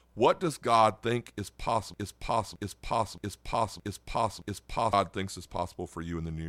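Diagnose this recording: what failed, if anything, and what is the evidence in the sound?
A broken-record loop from 1.94 to 4.93 s: one 620 ms fragment repeats exactly five times, likely a stalled player or stream. Unlike echo, nothing decays, and the speech that belonged there is lost.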